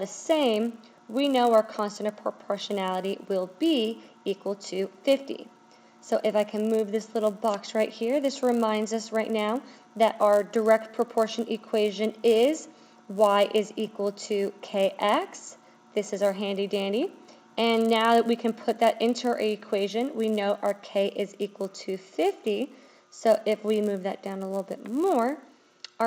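A steady 100 Hz buzz runs under the sound for the whole clip and drops away whenever the signal does. This is a resampler restarted on every block: each 10 ms block was converted on its own, likely an upsampling from 16 kHz to 48 kHz, so every block edge carries a small error.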